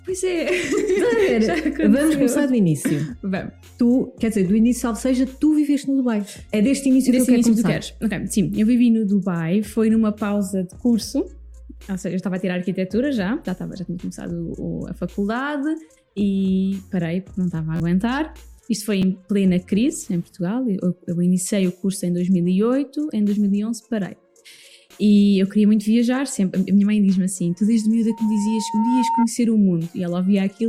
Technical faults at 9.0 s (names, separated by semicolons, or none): none